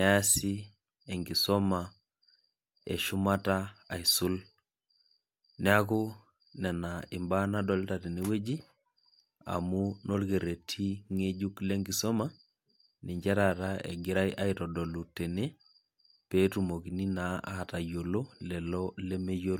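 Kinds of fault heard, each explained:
No kinds of fault are heard in this speech recording.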